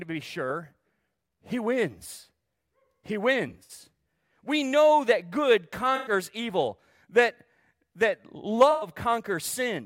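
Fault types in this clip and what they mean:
AAC frame loss with concealment: three short smeared, phasey patches, one just after "know that good", where the decoder filled missing frames from the last good spectrum.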